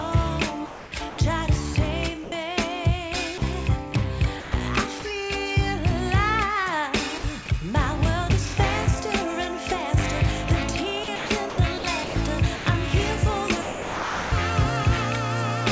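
From 0.66 to 1.18 s the audio turns choppy, with about 340 ms of it swapped for a hiss. This is sound chopped by the voice detector, likely the sender's voice activity detection switching on and off several times and letting comfort noise fill the gaps. Brief dropouts follow at 2.24 to 2.32 s (80 ms) and 3.38 to 3.42 s (40 ms). Each time the sound gives way to steady synthetic noise before returning, which is sound dropped by the voice detector, likely quiet material misjudged as background so that sending stopped.

From 4.40 to 5.02 s the choppiness returns, with about 160 ms replaced, again likely from the detector toggling. At 7.18 to 7.24 s a 60 ms gap is filled with comfort noise, likely another detector dropout. The longest chopped stretch runs from 11.04 to 12.66 s, where about 540 ms is lost in repeated cuts, and this is likely the same switching. From 13.62 to 14.32 s, 700 ms of sound is replaced outright by steady noise before the audio resumes, likely a single long dropout from the detector. 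Throughout, the call path's wideband codec limits the audio to nothing above 8 kHz, which fits G.722.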